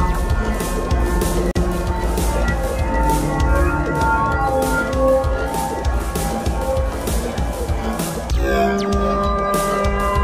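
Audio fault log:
1.51–1.56 s gap at a join of encoded pieces: 42 ms silence from untrimmed encoder padding, edges smeared; sound resumes where it stopped, nothing skipped.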